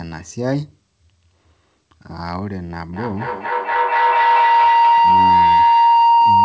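Feedback howl starts at 2.93 s and runs to the end of the speech clip. A microphone and loudspeaker in the same room on this call form a loop that adds level on every pass, so each repeat grows louder instead of fading. The sound narrows to a tone near 1 kHz, with a loop delay of roughly a fifth of a second, and peaks about 12 dB above the speech. The band stops at 8 kHz, which fits a G.722 call codec.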